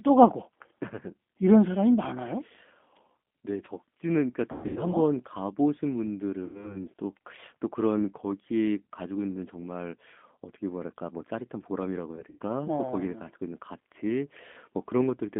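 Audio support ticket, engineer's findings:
Rough, slightly synthetic narrowband sound throughout, band roughly 200 Hz to 3.4 kHz, nothing above 4 kHz; G.729 codec (G.729A), consistent with 8 kbit/s CELP frame rebuilding.

Stretched buzzy tone or coloured noise fading to weak, distorted sound at 4.52–4.80 s, 6.45–6.81 s, 12.15–12.38 s; VoIP packet loss concealed by the speech codec extrapolating pitch, decaying gain, slow recovery.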